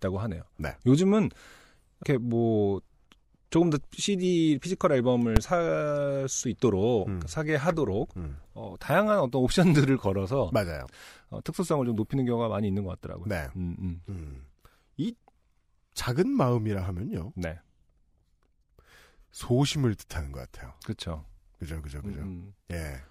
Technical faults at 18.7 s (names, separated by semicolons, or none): none